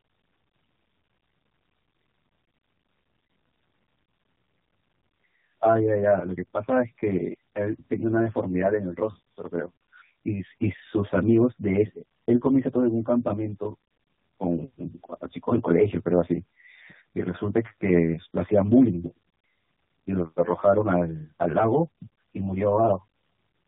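From start to finish the speech carries channel delay (comb filtering): one channel lags by roughly 10 ms before the mono sum, carving regularly spaced notches from around 40 Hz upward. The hollow, phasey colour stays fixed rather than sweeping, which separates it from flanging or phasing.

Also running throughout is tandem speech coding. The audio passed through two speech codecs in a row, the second re-encoding the first's damage, and nothing survives above 3.8 kHz. The result is rougher and more warbly than a single narrowband pass, which fits a low-rate coder followed by AMR-NB.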